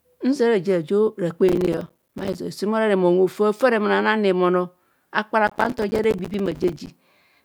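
Speech with two bursts of processor overload crackle, from 1.49 to 2.38 s and from 5.47 to 6.91 s. Dozens of tiny silent gaps tear through the sound. That fits missed deadlines on buffers of around 5 ms while the processor was overloaded.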